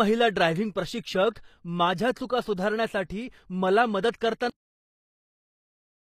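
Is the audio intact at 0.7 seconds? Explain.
No. At 0.7 s, as throughout the clip, the speech carries plainly audible damage, likely from HE-AAC compression at a low bitrate, which fits roughly 24 kbps. This codec keeps only the lower spectrum and rebuilds the treble by copying lower bands upward under a coarse envelope, so the upper harmonics don't line up with the real ones. Nothing sits above 14.9 kHz, and s sounds come across gritty, metallic or lispy.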